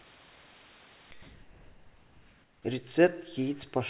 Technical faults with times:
0.00-1.11 sound dropped by the voice detector
1.22-2.64 comfort noise in place of the background

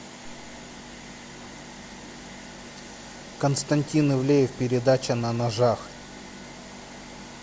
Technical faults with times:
none

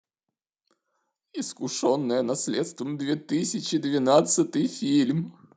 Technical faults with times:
1.61-5.34 automatic gain rising

